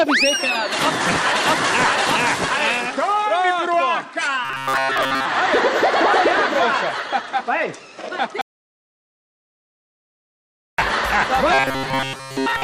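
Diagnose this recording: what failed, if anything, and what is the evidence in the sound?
The driver or buffer stage shows robotic sound from repeated short buffers at 4.45 to 5.25 s and again from 11.54 s to the end. A rigid 134 Hz buzz appears, likely from late audio being covered by looping a segment of about 7.5 ms while most of the real material is skipped. A spectrogram would show evenly spaced harmonic lines at multiples of 134 Hz.

From 8.41 to 10.78 s there is an audio dropout to silence lasting 2.37 s. The sound stops abruptly and returns with no room tone in between, likely because the input was lost upstream while the recorder went on writing zeros. The waveform would show a flat, near-silent stretch.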